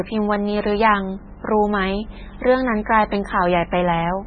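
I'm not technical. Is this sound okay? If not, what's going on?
No. Throughout, the speech sounds watery and swirly, with nothing above 9 kHz and heavy damage, most likely from MP3 compression; unlike a single crackle, it never stops. From 2.28 to 2.35 s there is a loose connector crackle, a brief irregular burst of scratching from a contact breaking, not a steady smear.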